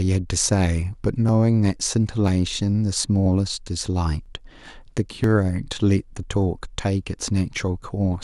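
From 0.29 s to 7.22 s the speech carries periodic USB or driver dropouts, repeating every 0.99 s, roughly seven in all. Each time the audio path stalls, around 10 ms of signal is skipped rather than filled, so the waveform jumps abruptly from one point to a later one. Each dropout is heard as a regular tick over the speech. On a spectrogram it appears as a thin full-height vertical line, and on the waveform as a sharp discontinuity.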